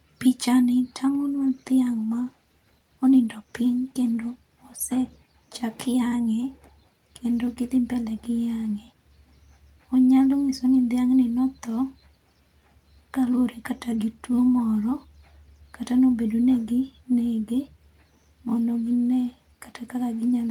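From 1.29 to 5.69 s, a call bitrate drop makes the speech rough and dull, consistent with roughly 64 falling to 24 kbps, worst for 2.8 s, with no gaps, unlike packet loss.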